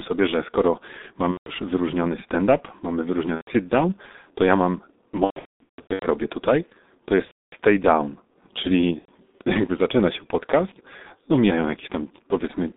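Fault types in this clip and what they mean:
G.723.1 codec: a low-rate telephony codec, here around 6.3 kbit/s, squeezing the speech into a 200 Hz to 3.7 kHz band. The whole clip sounds heavily muffled and rough, consonants smear together, and the voice model lags behind quick changes.
VoIP packet loss concealment by the speech codec: packets went missing and the decoder filled the gaps by stretching its last pitch and filter while fading out. It shows up five times, the longest a patchy stretch from 5.24 to 6.06 s, heard as buzzy, fading sound.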